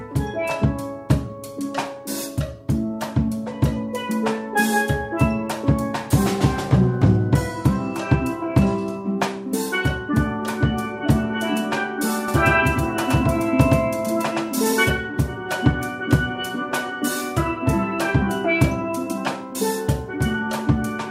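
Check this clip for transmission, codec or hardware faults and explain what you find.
One fault stands out. From 12.28 to 14.90 s the sound turns into a flat, slapback doubling: a second full-band copy about as loud as the original trails it by roughly a tenth of a second, with no decay. It switches on and off abruptly. This doubled audio track likely comes from the same signal being captured twice through a slower path.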